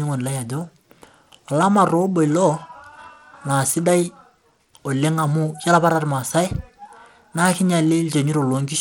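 From start to finish the speech carries plainly audible codec damage, most likely Bluetooth SBC compression at a low bit pool, with a harshness that fits roughly 96 kbps. Starved of bits, the upper sub-bands drop out or flicker, so sibilants turn dull and unstable, while coarse quantisation leaves a gritty noise and aliasing riding on the sound. A spectrogram would show treble energy blinking on and off in broad blocks, with speckled noise between harmonics.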